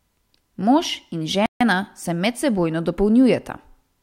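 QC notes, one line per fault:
1.46–1.61 s, playback stall. The speech cuts out abruptly and the output drops to silence for about 147 ms, then resumes. The gap lands mid-flow, not at a natural pause, so it reads as a hole rather than a breath. There is no fade on either side, just a hard stop and a hard restart. The likely cause is the player running short of data or its audio thread being blocked until it caught up.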